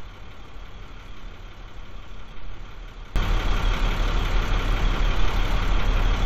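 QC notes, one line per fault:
3.16–6.26 s, sudden gain jump: at 3.16 s the level rises by about 16 dB in a single step and stays there to the end, with the background noise rising right along with the sound, which is why it reads as a gain change and not a louder source. The likely cause is a digital gain setting applied instantly, with no ramp. On the waveform the envelope widens abruptly at that point; on a spectrogram every band brightens at once along a sharp vertical edge.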